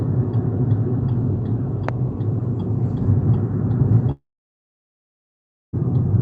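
At 1.89 to 1.91 s a single loud pop lands on top of the sound, peaking some 15 dB above it while the sound carries on underneath. It is likely a brief voltage pulse from a switch, plug contact or static discharge entering the signal chain. On the waveform it shows as one tall, narrow spike. On a spectrogram it is a thin vertical stripe spanning the full band.

From 4.11 to 5.75 s a long network dropout removes about 1.6 s of audio, likely from packets failing to arrive over the call link. The receiver first stretches the last sound into a brief fading buzz, then leaves roughly 1.5 s of near-silence before the sound resumes further on, with the missing stretch gone. The waveform collapses to a flat line. The spectrogram goes dark, except for a short smeared band at the start. Before and after the gap, the spectrogram's energy stops near 8 kHz, the limit of the Opus call codec.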